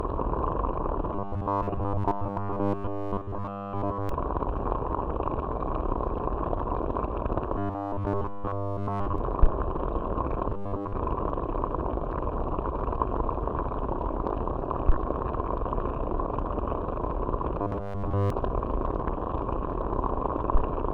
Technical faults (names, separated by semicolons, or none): robotic sound from repeated short buffers